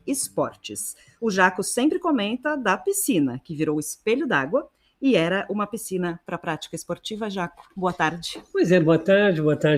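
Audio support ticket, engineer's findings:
Noise suppressor applied to music or sounds: speech-tuned suppressor left active on non-speech program, full length. Treats steady tones, ambience and reverb as noise and pulls them down. Audible as level pumping of a few dB, sustained parts and tails sinking, attacks mostly passing through. Net effect is a fluttering, thinned-out sound wherever content holds or decays.

Sound cut by the noise suppressor: four deeper dips, 0.29–0.64 s (about 17 dB), 0.94–1.22 s (about 16 dB), 4.68–5.02 s (about 18 dB), 7.5–7.77 s (about 14 dB). Same suppressor misclassifying held or fading sound as noise and gating it hard. Each dip affects a few hundred ms: level drops sharply, decays cut short, transients largely survive.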